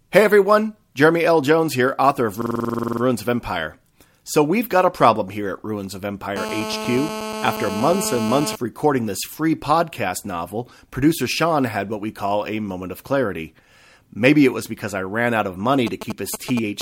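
From 2.42 to 3.02 s a system hang loop repeats one 46 ms slice thirteen times, fitting a 2048-sample buffer, heard as a 21.5 Hz stutter and seen as identical repeating waveform blocks. From 6.36 to 8.56 s, GSM phone buzz from a phone in a call adds a steady, raspy 217 Hz buzz about 8 dB below the speech, drawn as evenly spaced horizontal harmonic lines. From 15.87 s to the end, GSM signalling bursts give a galloping dit-dit pattern of brief 217 Hz buzzes, roughly 10 dB down, appearing as short, separated vertical clusters.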